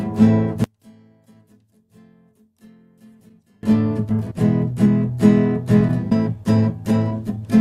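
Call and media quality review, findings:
One channel inverted, 0.64 to 3.63 s. Audio drops by about 32 dB and only a residue remains. Likely cause: reversed polarity on one stereo channel, so shared content cancels in the mono downmix.

Skip ahead, 4.09 to 4.11 s. Playback jumps forward with no fill. Roughly a second of audio is lost. Probable component: jitter buffer or transport discarding a stretch while later audio was queued. The two sides are joined almost directly.

Jitter buffer speed-up, 4.19 to 5.18 s at 110% speed and 5.80 to 7.37 s at 106%. The audio sounds hurried at unchanged pitch. About 100 ms is trimmed in each stretch by repeatedly cutting short pitch-period pieces to reduce excess buffered delay.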